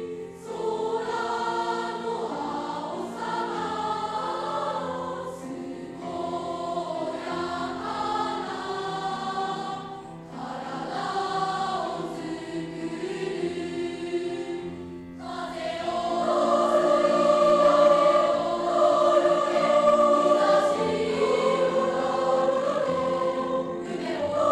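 Time-stretched section, 22.40 to 24.51 s: the pace jumps to 1.86 times normal speed with unchanged pitch, sounding rushed, likely from software dropping short slices.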